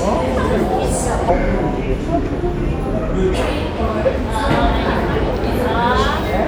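From 1.30 to 3.34 s there is a section at the wrong speed, likely caused by that stretch being clocked out at the wrong rate during editing or playback. It runs at 0.744 times its proper speed, so everything in it slows and drops in pitch together by roughly five semitones, sounding heavier and dragged compared with the surrounding sound. The change is abrupt at both ends, with the original speed and pitch snapping back at 3.34 s.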